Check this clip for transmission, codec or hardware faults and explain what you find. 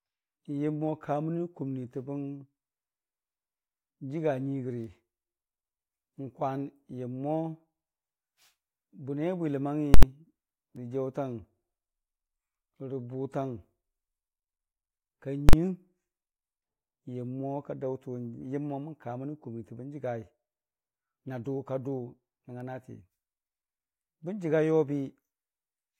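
Two bursts of invalid numbers at full scale hit the speech, at 9.94–10.03 s and 15.49–15.53 s. A calculation produced infinite or undefined values that were pinned to maximum amplitude for a whole block, about 85 ms and 43 ms long, which fits blocks of 4096 and 2048 samples. Each block is heard as loud popping that blots out the speech.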